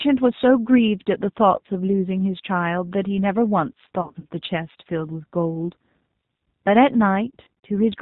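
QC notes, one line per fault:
Throughout: G.729 codec. Speech is cut off above 4 kHz and rebuilt from filter and pulses at 8 kbit/s, so it sounds plainly rough and synthetic.
4.01–4.26 s and 7.34–7.47 s: VoIP packet loss concealed by the speech codec. Gaps up to 40 ms, 160 ms in each event, come out as fading buzz or noise as the decoder repeats its last frame.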